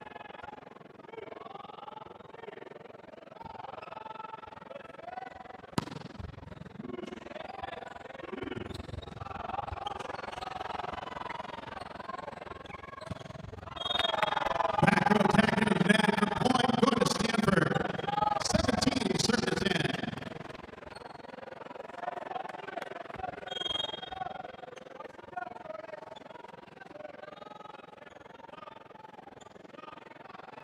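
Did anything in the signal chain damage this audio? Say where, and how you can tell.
Yes. Overlap-add ripple throughout, from frame-based processing. Level dips about 60 dB around twenty times a second. Uneven window overlap causes this fast flutter.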